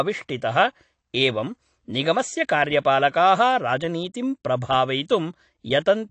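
The speech in this clip carries audible codec damage from start to finish, and its likely cause is AAC compression. Nothing sounds above 8.6 kHz, so sibilants lose their top edge and the sound turns dull. What separates this from a simple low-pass filter is the smeared, unstable texture left below the cut-off, where a coarse spectral budget, consistent with AAC-LC at about 32 kbps, has thinned out detail.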